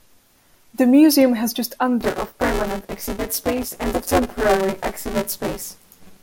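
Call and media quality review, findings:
Robotic 188 Hz buzz on speech, 2.01 s to end. Buffer tearing: writer and reader cross every period, fits a 256-sample buffer; about half of each buffer is stale.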